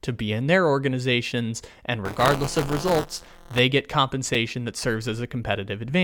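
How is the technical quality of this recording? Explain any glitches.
Two glitches stand out in the speech.

From 2.05 to 3.59 s, right after "in their organizations and", there's buffer tearing. The writer and the hardware reader cross inside each buffer, so about a tenth of every buffer replays audio roughly 20 ms old. That produces a rattly 172 Hz buzz, which fits a 256-sample buffer.

At 4.34 s there's a gap between stream segments. The timestamps of two segments leave a 6 ms hole that gets filled with silence, heard as a sharp-edged dropout.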